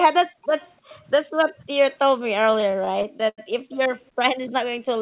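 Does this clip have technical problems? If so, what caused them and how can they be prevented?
Yes. Three kinds of fault can be heard.

Background gated by the echo canceller: from 0.27 to 0.42 s and again from 1.26 to 1.37 s, the room sound dips sharply, by about 40 dB and then about 36 dB. This happens because the canceller clamped the microphone while the far end's loudspeaker was active. On a waveform the noise floor flattens to near silence for about 150 ms and 100 ms. On a spectrogram the faint background band goes blank. A better-tuned or full-duplex echo canceller, with comfort noise to fill the clamped stretches, prevents this.

Echo leak: a faint delayed copy of the sound trails behind at 0.42–0.72 s, 0.89–1.05 s, 1.56–1.6 s, 3.73–3.78 s and 3.97–4.1 s. It lags by about 0.3 s each time and sits about 25 to 40 dB below the main signal. The likely cause is a loudspeaker at the other end whose echo canceller let part of its microphone pickup through. 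A spectrogram shows weak ghost copies of the harmonic patterns, shifted 0.3 s later. Headsets, or a stronger echo canceller on that end, prevent it.

Repeated stalls (stutter): between 2.54 and 3.4 s, the audio drags and stutters. About a dozen short holes were bridged by stretching the last sound. The longest lasted 88 ms, and together they filled 212 ms, about a quarter of that span, with nothing actually lost. This is the jitter buffer repeatedly running dry as packets arrived late. On a waveform, small repeated segments appear, and the spectrogram shows smeared, frozen patches of spectrum. A larger adaptive jitter buffer and a steadier network connection prevent it.

The narrow bandwidth, with nothing above 4 kHz, comes from the G.711 call codec and is expected.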